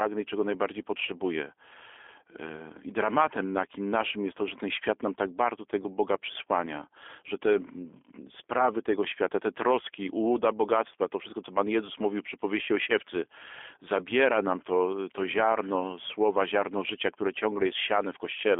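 From start to finish the speech carries G.729 codec damage, consistent with an 8 kbit/s stream that rebuilds each frame from a vocal tract filter, pitch predictor and sparse pulses, so it sounds rough and synthetic. A spectrogram shows energy held within 300 Hz to 3.5 kHz and blank above 3.7 kHz.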